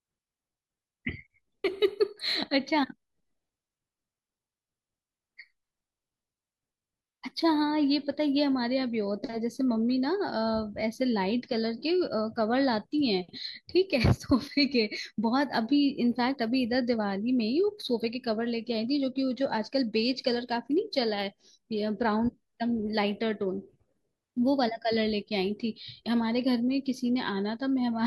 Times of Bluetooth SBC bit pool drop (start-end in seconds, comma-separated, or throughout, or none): 19.00-20.80